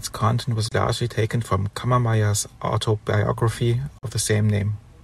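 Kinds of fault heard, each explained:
Bluetooth dropout: The speech cuts to silence twice, for about 29 ms at 0.68 s and about 44 ms at 3.98 s. The likely cause is audio packets reaching the headphones too late and being discarded; the gap lengths fit two and three lost packets. Unlike a stutter or repeat, nothing replays; the sound resumes further along, as if it had continued during the silence.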